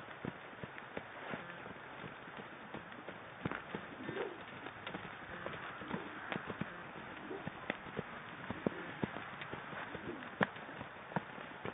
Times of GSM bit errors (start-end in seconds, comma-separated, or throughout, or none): none